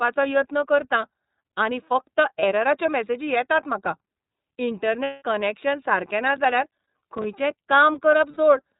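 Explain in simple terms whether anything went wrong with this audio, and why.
iLBC codec, throughout: the speech is squeezed into a narrowband phone-call format that codes each 30 ms slice on its own. Everything above 4 kHz is gone, so the voice sounds muffled, slightly rough and synthetic, and that damage is plainly audible.

Lost iLBC frames, at 2.39 s, 5.04 to 5.22 s and 8.31 s: pieces of audio never arrived, so the decoder filled each hole by repeating the last bit of voice with some noise. After "यत्न करतां आनी फकत" a 30 ms gap passes as a brief buzzy smear. Just before "कनॅक्शन सारकें" a longer 180 ms gap becomes a held, breathy vowel. Near the end a 60 ms gap does the same. The voice recovers almost at once each time.

Processor overload crackle, 6.28 to 7.33 s, right after "कनॅक्शन सारकें": the computer was too busy to deliver its tiny audio chunks on time, which fits chunks of about 5 ms. 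A few dozen deadlines were missed, and each miss left a hard-edged instant of silence. Together they make a gritty crackle that runs for about a second.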